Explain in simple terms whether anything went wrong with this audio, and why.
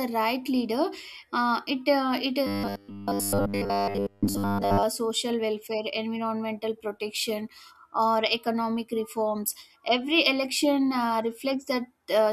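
From 2.47 to 4.83 s, just before "social welfare environmental protection", the speech has robotic sound from repeated short buffers. The whole stretch becomes a flat, metallic buzz at 100 Hz. Audio likely arrived too slowly, so tiny chunks of about 10 ms were replayed.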